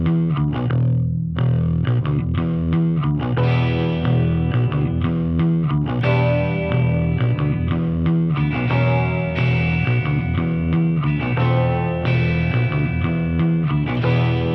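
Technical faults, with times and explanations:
No technical faults are present, so there are no times or explanations to give.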